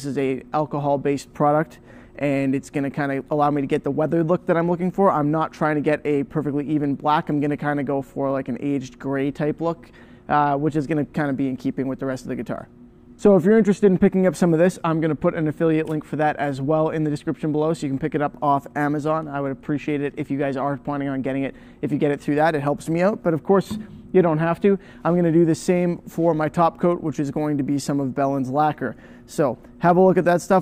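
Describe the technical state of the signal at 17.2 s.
At 17.2 s the signal is intact, with no dropout, distortion, glitch or other fault audible there.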